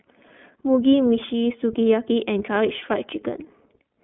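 From start to finish the speech carries iLBC codec damage, and it is plainly audible. Each short frame, which fits the 20 ms mode and roughly 15 kbps, is coded on its own, so the sound turns slightly rough and synthetic. The line band runs about 200 Hz to 3.4 kHz. A spectrogram shows a hard ceiling near 3.6 kHz with empty space above and thin energy below 200 Hz.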